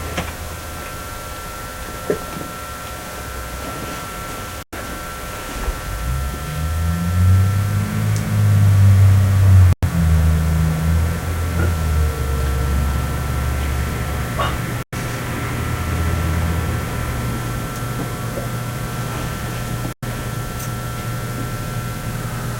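A gap between chunks breaks the sound at 4.63, 9.73, 14.83 and 19.93 s. Each is a 100 ms hard-edged silence inserted where 5 s chunks join, so nothing is lost but playback stops. On the waveform and spectrogram these show as clean, full-band blank columns.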